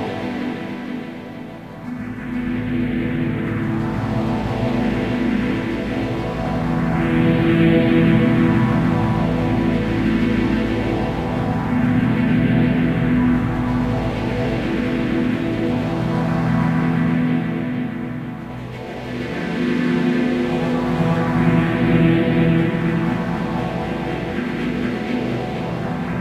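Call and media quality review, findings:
No audible faults detected.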